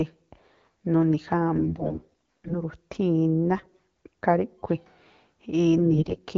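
AMR bit errors strike at 1.56 to 2.58 s, 3.57 to 3.79 s and 5.80 to 6.19 s. Weakly protected bits arrived flipped. Excitation pulses land wrongly, and pitch, gain and spectrum drift. Level holds, but speech turns hoarse and gargly, worst in the first burst.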